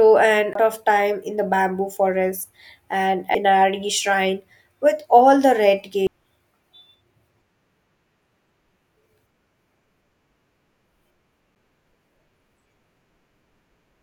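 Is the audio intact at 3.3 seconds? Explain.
No. A CD skip occurs at 3.35 s. A knock or surface flaw throws the player's laser onto a different turn of the disc's spiral track, so playback loses its place. The player mutes for only a few milliseconds, heard as a brief tick, and the speech then carries on from a different point on the disc rather than the moment that should have followed, leaving an abrupt discontinuity in the flow.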